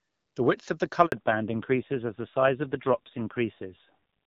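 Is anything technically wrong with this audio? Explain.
Yes. There are two faults, and they are linked.

At 1.06 s the sound cuts out for 60 ms, until 1.12 s. This is a handover gap. The call switched networks, and no speech frames arrived during the switch. The sound fades quickly, then stays silent. Whatever was said in that gap is lost.

From 1.12 s to the end, there is a fallback to narrowband. The clear HD Voice path, which fits AMR-WB at about 12.65 kbit/s, gives way to an older narrowband codec. Nothing above 4 kHz survives. The speech turns duller and rougher, which fits a low AMR-NB rate near 5.9 kbit/s.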